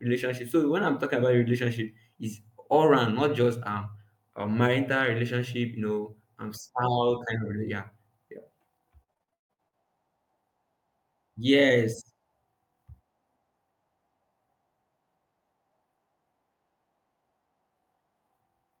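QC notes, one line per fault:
9.03–9.74 s, repeated packet loss (robotic sound): the speech turns choppy, breaking into a stuttering, machine-like texture with chunks absent. Across this 0.71 s stretch there are eight separate dropouts, the longest about 159 ms. Each hole is papered over by stretching the preceding sound, so roughly half the span (about 55%) is synthetic fill rather than real audio. The gaps come too close together for the patches to blend, which produces the robotic effect.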